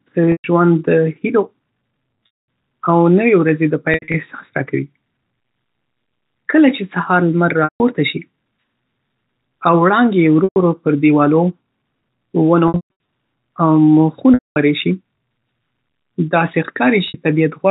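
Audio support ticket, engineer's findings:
Packet loss with pitch repetition at 0.32–0.44 s (before "ژوندد هیلو"), 2.26–2.29 s (before "او نوې"), 3.94–4.14 s, 7.64–7.80 s (after "سهار لمر"), 10.44–10.56 s, 12.68–12.99 s, 14.34–14.56 s, 17.08–17.14 s. Gaps 60–300 ms; 3.94 s and 12.68 s scattered, longest runs 80 and 140 ms. Receiver concealment loops last pitch period: held, buzzy tone, fading to silence on longer gaps. Losses fit 20 ms packets. Packet drop on the G.711 A-law path.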